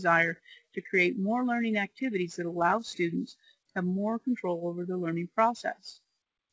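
Clock drift between sender and receiver runs through the whole clip: the sending side's clock is slow by around five percent, so the receiver's jitter buffer keeps draining and has to be topped up. On a spectrogram this shows as no single event but as tiny vertical seams scattered through the clip, while the waveform's envelope looks subtly stretched. Across the clip the band stops cleanly at 8 kHz, which fits the G.722 call path at 64 kbps.

Repeated timing corrections follow from 0.14 s to the end at 6.52 s. To fill the gaps, the receiver keeps repeating short slices, so playback runs at 95 percent speed and gains something like 0.3 s overall. The edits are all in the same direction but unevenly spaced, heard as faint stutters and a slightly dragging, unsteady tempo. In the waveform, brief duplicated cycles sit at irregular points, and on the spectrogram short frames appear twice with small discontinuities at each join.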